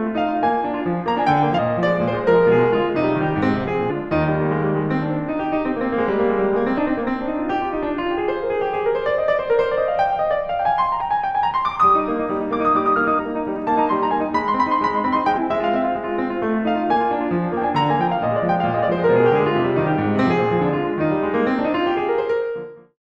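Music that lurches forward six times, at 1.54, 3.86, 6.74, 10.96, 13.15 and 15.33 s, each jump marked by a short smeared blip. These are compressed frames skipped: runs of 46.4 ms frames missing or rejected, dropping roughly a fifth to a third of a second each time, before the smooth fade-out ending at 22.98 s.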